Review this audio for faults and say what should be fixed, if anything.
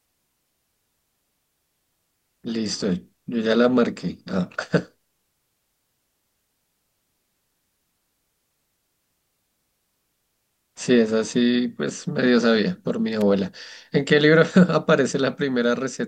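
At 13.21 s the speech carries an electrical switching spike, a sharp snap of roughly -15 dBFS, likely from a nearby switch or static discharge arcing into the line. The waveform shows a narrow spike, and the spectrogram shows a thin full-height vertical line. Preventing it means keeping switched loads and motors off the recording circuit and using balanced, shielded cabling.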